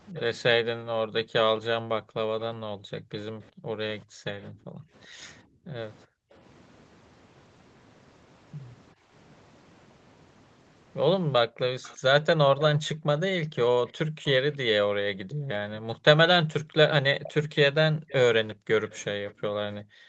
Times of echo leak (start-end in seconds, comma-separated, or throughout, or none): 0.14-4.44, 11.82-15.35, 17.23-20.09